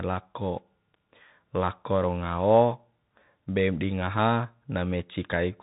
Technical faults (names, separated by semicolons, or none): Bluetooth CVSD headset codec